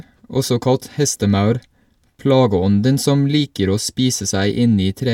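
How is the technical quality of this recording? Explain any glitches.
No technical faults are audible in this recording.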